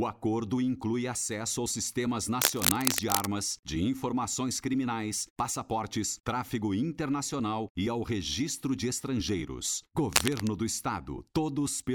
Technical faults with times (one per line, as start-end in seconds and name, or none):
2.41-3.29 cable scratch noise
10.13-10.48 cable scratch noise